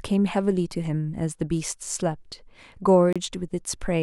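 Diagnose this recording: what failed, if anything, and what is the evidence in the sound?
The speech drops to silence at 3.13 s and comes back at 3.16 s, a gap of about 29 ms. Nothing fades. The sound simply stops and resumes abruptly. The fault sits at the playback end, on the wireless link. The likely cause is a Bluetooth stall. Radio interference delayed packets, the receiver's buffer emptied, and output paused until retransmitted packets arrived. The short, clean gap fits a brief retransmission wait.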